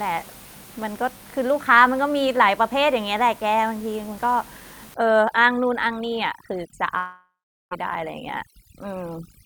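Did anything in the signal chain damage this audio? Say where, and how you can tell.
Yes. Overdone noise removal from 4.94 s to the end, in call processing: bands near the noise estimate are cut off, leaving twinkling specks in the background.

Long network dropout from 6.97 to 7.73 s: the last sound smears into a fading buzz or hiss, then 0.39 s of silence, and 0.74 s of speech is missing, likely lost packets.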